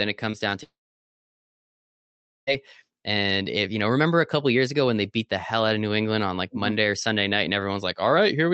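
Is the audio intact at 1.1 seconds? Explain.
No. From 0.63 to 2.49 s the speech drops out, likely a long network dropout. The receiver stretches the last sound into a brief fading buzz, then leaves near silence across 1.1 s. Speech resumes afterwards with roughly 1.8 s missing.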